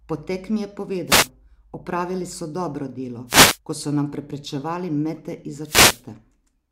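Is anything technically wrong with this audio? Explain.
Yes. Short bursts of static swish across the speech at 1.07 to 1.29 s, 3.27 to 3.58 s (just before "ko so") and 5.62 to 6.04 s: wireless microphone noise hits. The analogue FM radio link fades as reflections cancel, letting receiver noise rise over the voice.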